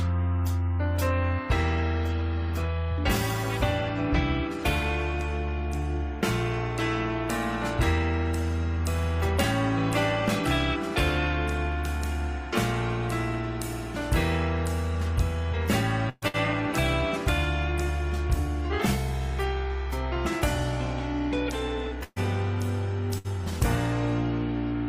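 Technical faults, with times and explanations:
16.09–16.25 s, 16.28–16.37 s, 22.04–22.19 s, 23.18–23.27 s: burst of packet loss. About 60–120 ms of audio is lost each time. The concealment stretches the preceding sound and fades it, dropping to brief silence in the two longer gaps, before playback resumes with that portion skipped.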